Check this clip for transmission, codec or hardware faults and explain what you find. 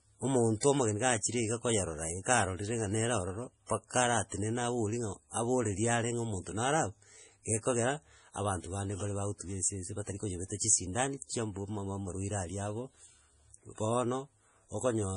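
The speech carries heavy compression damage throughout, plus two brief pre-echo events.

Across the whole clip the sound is watery and swirly, with a metallic edge on s sounds and nothing at all above 10.5 kHz. This is likely MP3 compression at a starved bitrate, one that fits about 32 kbps. With too few bits, the encoder chops the treble at a fixed cut-off and drops weak frequency lines, which flicker on and off from frame to frame and produce the swirl.

Pre-echo occurs at 0.60 to 0.63 s, just before "omogeni ga", and again at 3.67 to 3.70 s. In each case a short hiss of 25 and 32 ms respectively creeps in ahead of a sharp onset, and the attack itself sounds softened. The codec spreads its quantisation noise across a whole transform block, so noise sized for the loud attack late in the block also fills the quiet moment before it.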